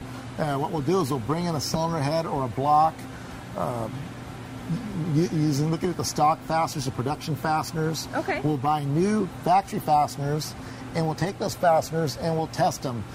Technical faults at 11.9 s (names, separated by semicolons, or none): none